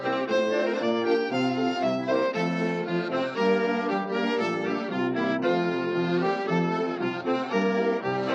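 From 3.91 s the adaptive stream drops to a lower bitrate without a gap. Treble dulls suddenly, and the spectrogram empties above 11.5 kHz, which fits low-rate HE-AAC.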